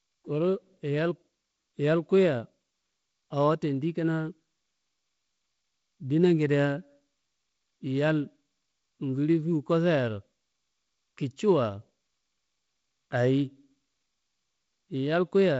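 No technical faults can be heard in this speech recording. It carries the sound of G.722 wideband telephone coding at 48 kbit/s, with a light trace of coding noise and nothing above about 7.7 kHz.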